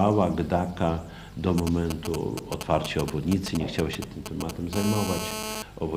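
From 1.58 to 4.75 s, GSM signalling bursts intrude: a nearby 2G phone's intermittent radio bursts are rectified by the audio circuit, giving galloping ticks and short 217 Hz buzzes roughly 5 dB below the signal. From 4.76 to 5.62 s, a steady GSM phone buzz follows as the phone enters a call, a hard, raspy 217 Hz tone rich in harmonics, about 6 dB below the signal.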